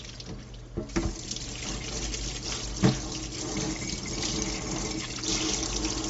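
The clip is a recording of sounds with plainly audible Bluetooth LC3 compression damage throughout. Nothing is present above about 7.7 kHz, and the upper band has a grainy, noisy texture instead of clean detail, where the transform codec has discarded high-frequency content and filled the gaps with shaped noise. The damage is consistent with the LC3 codec of Bluetooth LE Audio, likely running near 32 kbps, and fits its 10 ms frames.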